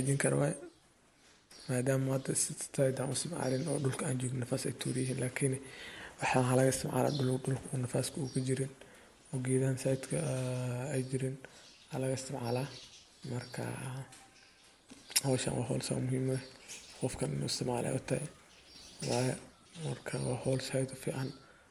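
From 16.73 to 19.33 s, sample clock jitter, timing errors of roughly a microsecond or two, adds hiss about 35 dB below the speech, showing as faint high-frequency haze that tracks loud passages.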